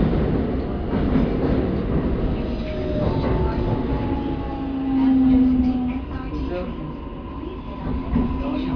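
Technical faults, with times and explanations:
No technical faults can be heard anywhere in the recording; the signal holds steady and continuous from its first moment to its last.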